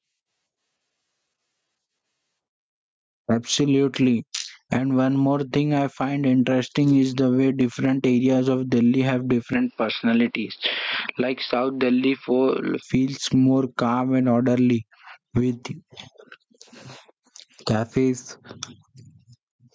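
Throughout the speech, loud and soft parts sit closer in level than they should, with the level swinging by roughly 10 dB. This gain pumping is likely caused by input gain set far too high, with a fast limiter repeatedly clamping it down and squashing the dynamics.

From 9.53 s to 12.83 s, just before "more calm and orderly", the sound turns duller and boxier. Its band narrows from the 8 kHz ceiling of the call microphone path to nothing above 5.5 kHz. The level drops about 5 dB, and a faint new noise floor appears roughly 45 dB down. There is no gap at the change. This is likely an input switched to a poorer device, such as a headset's call profile, before switching back.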